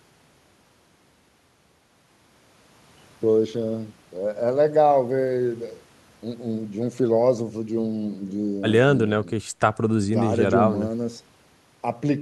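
Speech recording with no audible technical faults anywhere.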